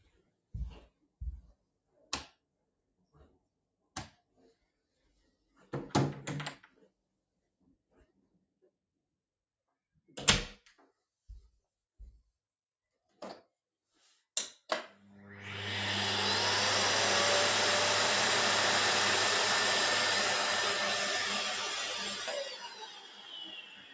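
A noise suppressor applied to music or sounds runs through this recording of everyday sound, which has passed through call microphone processing with nothing above 8 kHz. A suppressor tuned for speech treats steady or fading parts of these sounds as noise, so the level keeps swinging by roughly 15 dB. Onsets get through while sustained portions sink, and the result pumps and thins.

The sound is cut by the noise suppressor at 0.00 to 0.54 s, 0.84 to 1.19 s, 1.45 to 2.12 s, 2.28 to 5.73 s, 6.61 to 8.98 s and 21.23 s to the end. The drops reach about 21 dB, and about 18 dB in the last stretch. The long sections from 2.28 s and 21.23 s lose about three seconds each, with sustained tones and decays pulled down and tails cut short.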